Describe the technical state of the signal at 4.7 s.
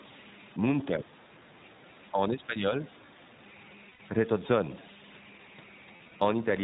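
At 4.7 s the speech carries converter idle tones, which run through the whole clip rather than starting there. An undithered delta-sigma converter, fed a small input, settles into repeating bit patterns that turn into a tone, here somewhere around 2 kHz, sitting about 21 dB below the speech, with grainy noise beneath quieter syllables. Unlike mains hum or a fixed interference tone, its pitch depends on the input's offset rather than on a supply frequency.

The same moment also shows plainly audible iLBC codec damage, again present throughout. At 15.2 kbps the codec works in 20 ms frames, coding each frame's excitation without relying on the previous one. The speech stays intelligible but sounds rough and slightly synthetic, and nothing passes above 4 kHz, so it sounds narrowband. The mushy, swirling smear typical of low-bitrate perceptual codecs is absent here. The bass roll-off from the call microphone processing is normal high-pass filtering and not part of this damage.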